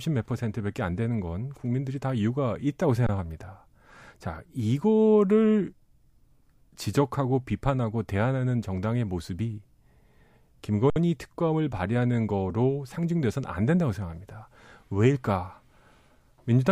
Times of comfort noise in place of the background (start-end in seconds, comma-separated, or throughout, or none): none